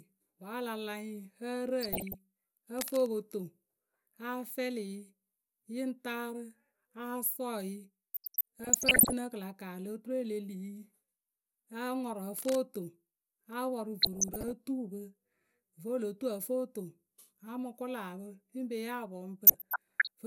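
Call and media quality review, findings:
DAB burbling, 1.81–2.14 s, 8.14–9.13 s, 14.01–14.52 s, 19.47–20.07 s: noise blips and sub-band level jumps in speech. Weak reception lets bit errors past error correction into MP2 data, corrupting sub-band samples and scale factors frame by frame.

Cable scratch noise, 2.78–3.08 s and 12.38–12.55 s: rough rustling bursts about 5 dB, then about 10 dB below speech. Likely a worn cable or connector whose contact resistance fluctuates when moved.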